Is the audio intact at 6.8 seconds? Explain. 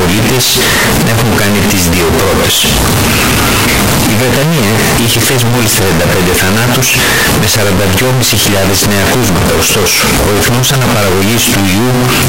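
No. At 6.8 seconds, as throughout the clip, the speech is a very loud, harsh, nearly square waveform sitting at an almost fixed, high level, with background noise as loud as the speech. This is a float read as integer fault, likely 32-bit float samples interpreted as 32-bit integers, so sign and exponent bits set the level.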